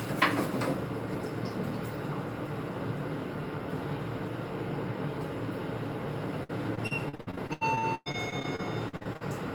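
An everyday sound clip with repeated packet loss (robotic sound) from 6.43 to 9.23 s. More than twenty short holes break the audio. Each is patched by stretching the previous sound. The longest lasts about 109 ms. Nearly a third of the stretch is concealed, leaving it choppy with pieces missing.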